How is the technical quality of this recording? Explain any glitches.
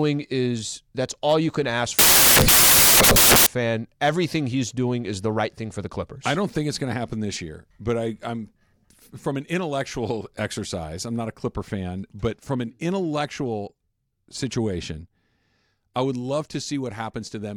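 There's one real glitch here. Right after "all you can ask", from about 1.99 to 3.46 s, the speech turns into loud, harsh broadband noise: samples built from the wrong bytes. The byte order or alignment slipped, so the jittery low bits became the bulk of each value.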